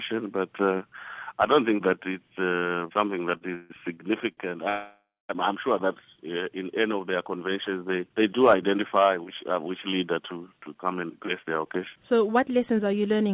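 A short stall from a late packet occurs twice, at 2.58 to 2.65 s and 2.67 to 2.80 s. The jitter buffer ran dry, so the last sound is held for 46 ms and then 34 ms, and playback resumes with nothing lost.

Repeated stalls (stutter) follow from 3.37 to 4.39 s. In four separate gaps, the longest 150 ms, the receiver kept extending the sound until late packets caught up. About a quarter of that span is filler, so the audio drags and stumbles.

A call audio freeze runs from 4.69 to 5.31 s. The sound stretches into a fading buzz for roughly 0.6 s, including about 0.21 s of silence, and then resumes where it left off. The likely cause is packets held up in transit.

A jitter buffer speed-up runs from 10.83 s to the end. To shed excess buffered delay, the receiver trims tiny pitch-period slices repeatedly, removing about a fifth of a second in total. This makes the audio about 8% faster at unchanged pitch, and it sounds hurried.

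Throughout, the narrowband call path leaves nothing above 4 kHz, consistent with G.711.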